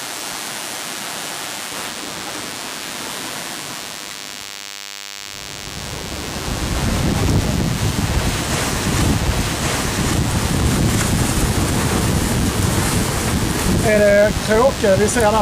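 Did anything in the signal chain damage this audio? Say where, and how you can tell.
Yes: DECT cordless phone buzz in the analogue wiring throughout. A thin, harmonic-rich 100 Hz buzz, harsher than mains hum, comes from rectified 10 ms radio bursts.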